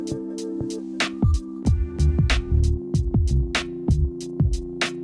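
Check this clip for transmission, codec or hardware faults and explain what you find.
Nothing wrong can be heard anywhere in this recording.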